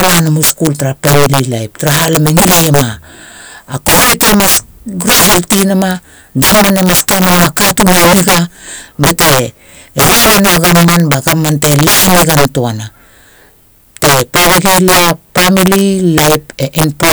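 Integer overflow runs throughout the speech: driven about 16 dB too hot, around 7 percent of samples wrap to the opposite sign, producing violent cracks on loud syllables.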